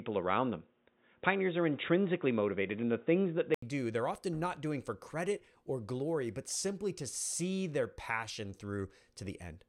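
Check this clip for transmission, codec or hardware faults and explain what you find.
One fault is audible: an input switched to a poorer device. From the start to 3.62 s the speech is band-limited, with nothing above 3.8 kHz, so it sounds dull and boxy. It carries a faint added noise floor, roughly 50 dB down, and sits about 5 dB off the later level. At 3.62 s an 80 ms silence precedes fuller-bandwidth speech, likely from the capture path moving off a narrowband microphone or headset call profile onto a better input.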